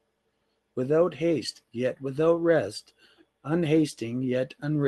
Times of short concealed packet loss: none

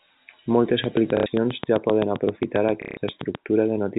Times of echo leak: none

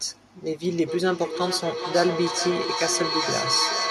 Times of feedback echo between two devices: 0.67-3.91

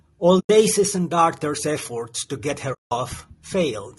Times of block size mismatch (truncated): none

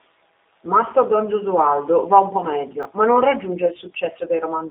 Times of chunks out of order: 2.83-2.85

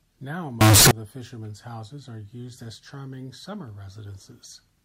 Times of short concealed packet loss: none

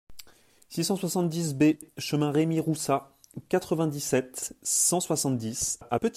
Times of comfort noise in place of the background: none

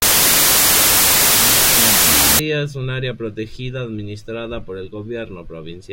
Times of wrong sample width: 0.00-2.39

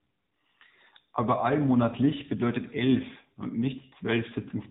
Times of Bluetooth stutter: none

